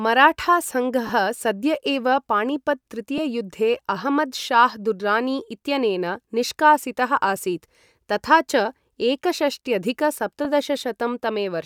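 Lost LE Audio frames occur at 1.07 to 1.10 s, a 22.5 ms dropout consistent with three 7.5 ms frames, then briefly at 3.18 s and 10.44 s. The LC3 decoder fills each gap by repeating the previous spectrum with randomised signs, producing a short noisy smear in the speech.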